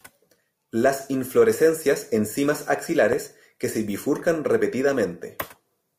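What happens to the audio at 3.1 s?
A single loud pop from 3.13 to 3.15 s, between "inflorescencias en cimas" and "que se bifurcan", likely a voltage spike, stands roughly 10 dB above the speech, a sharp waveform spike and a thin full-band vertical line on a spectrogram.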